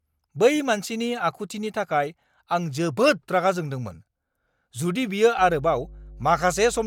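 At 5.39 s, just after "जुदि बियो", mains hum enters the speech and stays until the end at 6.87 s. It is a steady low tone at 50 Hz, sitting roughly 20 dB below the speech. Some low harmonics sit just above it. Power-line energy has leaked into the signal path. A ground loop or a nearby transformer is the usual route. The hum does not rise or fall with the speech.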